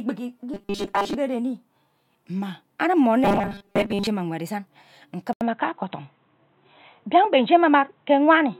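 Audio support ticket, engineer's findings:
Robotic sound from repeated short buffers, 0.54–1.15 s and 3.24–4.07 s: likely input starvation, with most audio skipped and ~5 ms chunks looped. Speech becomes a rigid metallic buzz at 200 Hz.

Input switched to a poorer device at 5.33 s, likely a headset call profile or fallback mic: 80 ms dropout, then a narrower band to the end. Speech turns dull and boxy, with a modest level shift and a faint new noise floor.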